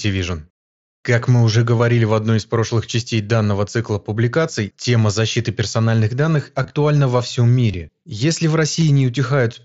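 Concealed Bluetooth headset packet loss at 1.78, 4.83, 6.63 to 6.70, 7.71 to 7.74 and 8.80 s. Missing headset packets were bridged by repeating recent waveform, so each gap of about 15 to 45 ms sounds like a brief buzzy tone with a slight warble.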